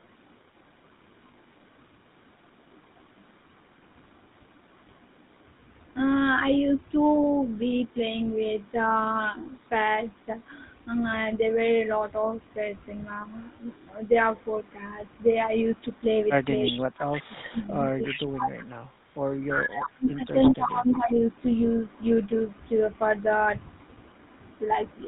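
GSM full-rate coding runs through the whole clip and leaves a buzzy, gravelly roughness on the speech, with nothing above 4 kHz, which fits the 13 kbps full-rate codec. The vocal tract is modelled and driven by a coarse, regularly spaced pulse excitation that keeps only a third of its samples, so the fine texture of the voice is replaced by a plainly audible grainy rasp.

An echo leak appears at 16.64 to 16.79 s. A copy of the far talker returns about 344 ms late and at about 5 dB below the speech, likely because a loudspeaker echo slipped past the echo canceller. Weaker scraps at about 10 dB down follow at 18.05 to 18.26 s, 19.83 to 19.89 s and 20.43 to 20.54 s, each a brief, delayed repeat.

Speech suppressed in double talk overlaps these, from 16.72 to 18.98 s, from 19.5 to 20.33 s and from 20.55 to 21.23 s. With both sides active, the canceller likely could not tell the local talker from the echo and turned everything down. 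The voice dips by roughly 30 dB in the first two stretches and around 25 dB in the last.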